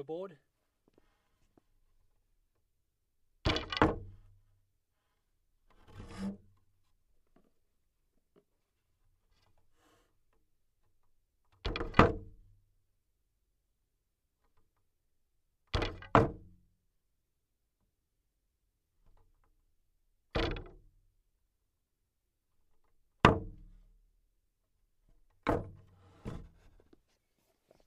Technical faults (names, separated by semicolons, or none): none